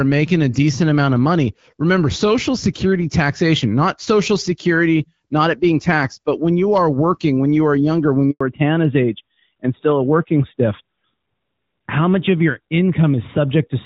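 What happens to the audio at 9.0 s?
At 9.0 s the call is in a fallback to narrowband that runs from 8.41 s to the end. The codec switches from HD Voice to an older narrowband one, so everything above 4 kHz disappears and the speech sounds duller and rougher. On a spectrogram the upper band goes dark abruptly at 8.41 s.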